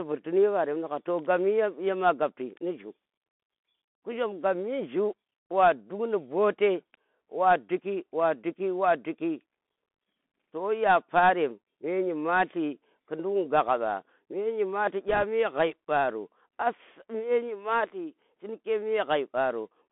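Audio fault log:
throughout: Bluetooth CVSD headset codec. Audio sits in a 200 Hz to 3.5 kHz band, consistent with a 64 kbps one-bit delta stream. Sibilants turn scratchy, loud high sounds distort as the adaptive step lags, and granular hiss lies underneath.
15.09 to 15.24 s: bit errors on a Bluetooth voice link. A short rushing crackle with no sharp clicks, since each flipped bit shifts the reconstruction only slightly and decays. The density suggests an error rate around one to two percent.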